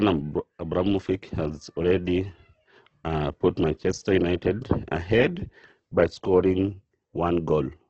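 A speech clip, affected from start to finish. Nothing is heard above about 8.2 kHz. Voiced sounds come out grainy, rough and noisy, with heavy damage. The likely cause is Opus compression in its music mode, at a low bitrate near 12 kbps.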